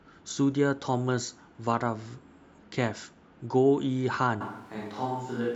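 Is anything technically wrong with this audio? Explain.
Yes. From 4.41 s to the end, the speech turns roomy and hollow, with thinner bass, a drop of about 5 dB, and room noise around 25 dB below the speech. This is likely a switch to a distant microphone, which captures more reflections and less close-up low end.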